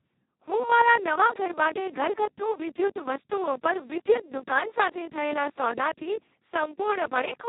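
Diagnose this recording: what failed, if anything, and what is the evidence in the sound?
Speex codec damage runs through the whole clip, at the codec stage. The speech sounds hoarse, buzzy and close to robotic, and nothing is present above 3.8 kHz. That points to Speex at its lowest quality settings, around 2 kbps. At that rate the CELP coder has almost no bits left to describe the excitation, so the voice collapses toward a vocoder-like rendering. The heavy damage is baked into the decoded audio.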